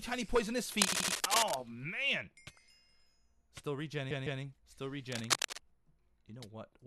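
From 0.72 to 1.61 s, cable scratch noise runs a few decibels above the sound. It is dense, irregular rustling, not isolated clicks, which likely comes from a worn cable or connector being moved. The same scratching returns from 5.12 to 5.58 s at about the level of the sound.

Inside the first scratch, from 0.92 to 1.15 s, repeated frames make the same 78 ms slice play three extra times. The result is a rhythmic stutter that adds 235 ms rather than dropping any sound. From 4.10 to 4.42 s, a 157 ms block repeats twice more and adds 314 ms.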